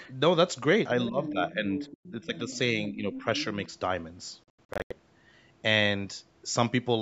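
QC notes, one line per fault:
1.09–1.9 s and 2.11–3.26 s, speech suppressed in double talk: With both ends talking at once, the echo canceller likely could not tell the near talker from loudspeaker echo and pulled the whole signal down. The voice sinks by up to about 10 dB and turns dull and patchy while the far side is active. Roughly half a second of the first span and about 0.7 s of the second are affected, in uneven pieces rather than one smooth dip.
1.26–1.31 s, 1.75–2.58 s and 3.13–3.45 s, other side's voice leaking through: The far-end voice, played on the talker's loudspeaker, likely got past the echo canceller and back into the microphone. A second voice sits about 10 dB under the main talker: a brief scrap near 1.3 s, a longer stretch from 1.75 s, and another after 3.1 s. It overlaps the suppressed passages, so both faults are heard together there.
4.44–4.93 s, Bluetooth dropout: Audio packets likely arrived at the headphones too late and were discarded, leaving the output silent until good data returned. 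The result is a cluster of holes totalling about 300 ms, spread across roughly 470 ms, the longest near 85 ms, which points to a burst of lost packets. Between gaps the sound jumps ahead as if it had kept playing.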